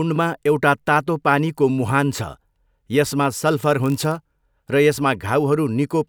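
From 3.56 to 4.36 s the speech picks up a block size mismatch (padded) fault. Each block arrives slightly short and is filled out with zeros, so tiny gaps chop the sound at 46.9 Hz, which fits a 1024-sample read block. It is heard as a low buzz, with pitch and pace essentially unchanged. A waveform would show regular dropouts, and a spectrogram would show evenly spaced vertical stripes.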